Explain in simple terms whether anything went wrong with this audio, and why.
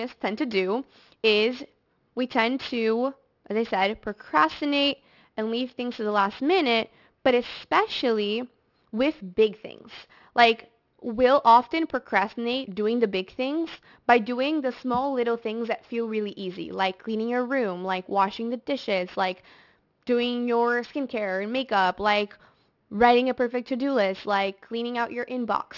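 Aliasing runs through the whole speech clip. The audio was converted to a lower sample rate, which fits a drop to 12 kHz, without first removing content above 6 kHz. That content folds back as false, unrelated tones, so hissy sounds like s and sh come out gritty and metallic.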